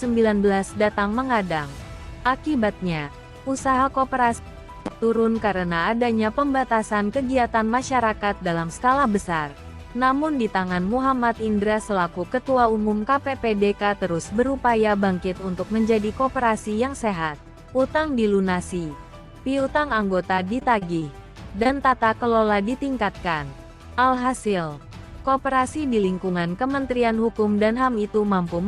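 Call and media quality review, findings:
Repeated packet loss (robotic sound), 20.35–21.03 s: network dropping or delaying packets, six gaps, longest 23 ms. Receiver concealment extends the last sound, about 14% of the span, producing choppy, robotic audio with pieces missing.

Short concealed packet loss, 21.63 s and 21.67 s, back to back: about 20 ms lost each time in transport. Decoder concealment continues the preceding sound, then blends back, heard as a brief smear or wobble.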